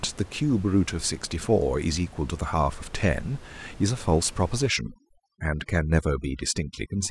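Speech clip with audible room noise about 21 dB below the voice; from 4.69 s to the end, overdone noise removal suppresses bands near the noise estimate, leaving twinkling specks in the background. A spectrogram shows scattered isolated bins and blank gaps.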